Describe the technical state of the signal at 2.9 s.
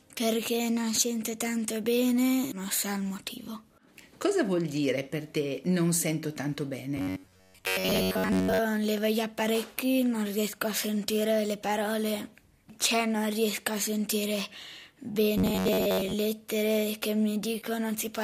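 At 2.9 s the signal is intact, with no audible fault at that moment.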